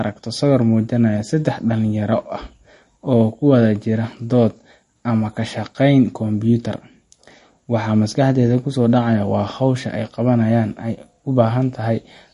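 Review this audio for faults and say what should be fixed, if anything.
Watery, swirly speech with blurred consonant attacks runs through the whole recording, and nothing remains above 11 kHz. That is the mark of likely MP3 compression at a starved bitrate, which fits about 40 kbps. The encoder drops the treble and switches weak frequency lines on and off between frames. On a spectrogram, the top edge is flat at 11 kHz, and the sibilants show patchy, flickering holes. Keep an uncompressed master or encode at a much higher bitrate.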